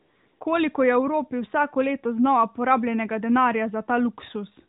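From 0 to 0.40 s the opening is AMR comfort noise: the phone sent no speech frames, so the receiver synthesised a smooth, steady hiss from a rough level and spectrum estimate. A noise gate would leave dead silence, not this artificial bed.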